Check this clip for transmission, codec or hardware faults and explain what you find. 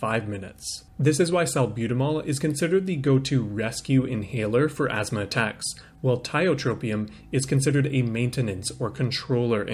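No transmission, codec or hardware faults are audible anywhere in the recording.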